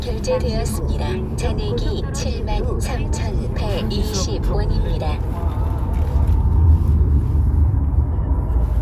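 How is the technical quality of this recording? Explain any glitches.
No technical glitches can be heard anywhere in this recording.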